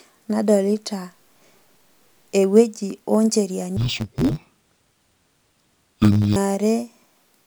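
From 3.77 to 6.37 s, just after "ewueji o ncheriani", interleaved audio is read as planar. Each 10.7 ms block, which fits a 512-sample block, holds alternating left and right samples, but its first half is read as one channel and its second half as the other. The speech turns dull and robotic, buzzing at about 94 Hz.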